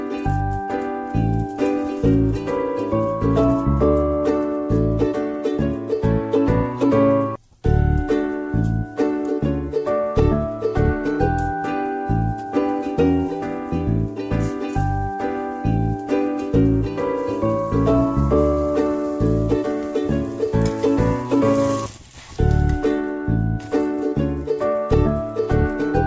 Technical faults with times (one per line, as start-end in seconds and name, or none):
none